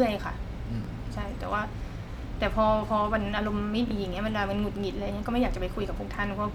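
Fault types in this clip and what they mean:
Bluetooth stutter: a lost or late wireless packet made the receiver replay its last 23 ms slice, so the speech briefly stutters twice, each consistent with one dropped packet.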